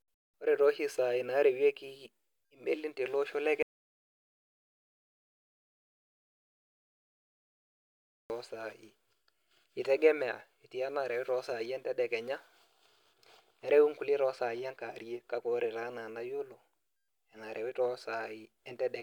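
A speech recording with an audio dropout to silence. At 3.63 s the sound cuts out completely and returns at 8.3 s. That leaves about 4.67 s of silence with no room tone. The input was likely lost while recording continued.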